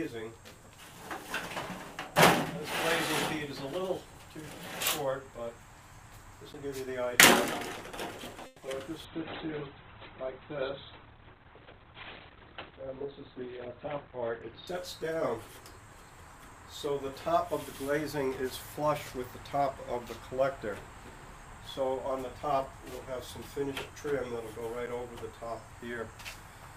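At 6.53 s a block of digital silence cuts in for about 11.6 ms, which fits one unfilled 512-sample buffer. The sound drops straight to silence and back, giving a sharp tick. The waveform shows a flat line with hard edges, and the spectrogram shows a thin blank column framed by broadband click streaks.

From 8.46 to 8.63 s the audio hangs as a 160 ms call audio freeze. The last sound is stretched into a fading buzz or hiss before playback resumes where it stopped, so nothing is lost but a delay is added. The likely cause is delayed packets draining the jitter buffer. On a spectrogram this appears as smeared, repeating horizontal bands with no new detail.

Right after, short concealed packet loss hits at 8.66–8.68 s and 8.71–8.73 s. Each hole of about 10 ms is patched by extrapolating the preceding sound, heard as a quick smear or wobble. The spectrogram shows brief blurred patches where fine structure briefly dissolves.

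A call bitrate drop runs from 9.05 to 16.45 s. The encoder falls from 96 to 11 kbps and stays at the bottom for roughly 5.2 s. It codes coarsely and removes content above 4 kHz, where 20 kHz was present before, so the sound turns muffled and watery. The spectrogram shows a flat ceiling at 4 kHz.

Within that stretch, a jitter buffer speed-up from 12.35 to 14.26 s trims short pitch-period slices to work off excess delay, about a tenth of a second in total. Playback runs about 6% fast at unchanged pitch and sounds slightly hurried. The waveform shows compressed periodicity with tiny splice points.

At 24.86 s a second block of digital silence, about 8.7 ms long, produces another abrupt tick. It appears as a flat gap in the waveform and a narrow vertical notch on the spectrogram.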